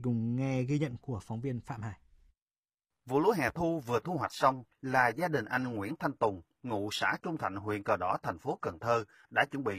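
Speech, which from 3.71 s to the end switches abruptly with no gap to an adaptive stream at a lower bitrate, losing everything above 14.8 kHz; the sound points to a drop from roughly 96 to 20 kbit/s, unlike a dropout, which would leave a silence.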